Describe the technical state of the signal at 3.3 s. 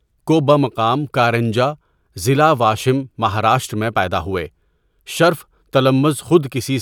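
At 3.3 s the speech signal is intact, with no technical fault audible at that point.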